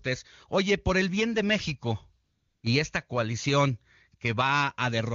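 From 2.23 to 2.63 s, the real background drops out and a smooth, steady hiss takes its place for 400 ms. This is AMR comfort noise: the phone treated the gap as silence, stopped sending speech frames, and the receiver synthesised noise from a rough level-and-spectrum sketch.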